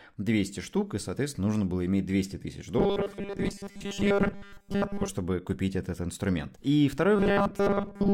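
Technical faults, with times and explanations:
2.79–5.08 s and 7.16–8.14 s: robotic sound from repeated short buffers. The speech becomes a rigid, metallic 200 Hz buzz, loosely following the words, clearing before "купить этот инструмент" and returning through the clip's end. This likely comes from a 5 ms block replayed while most incoming audio is dropped.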